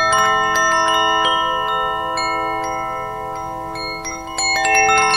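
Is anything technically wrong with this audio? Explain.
Yes. Throughout the clip there is plainly audible damage that points to MP3 compression. The quieter detail warbles with a watery, swirling quality. Sharp attacks sound smeared. This likely comes from an encoder short of bits, consistent with a low rate around 64 kbps. It dropped weak frequency lines that flicker on and off between frames. A spectrogram would show patchy, blinking holes in the spectrum.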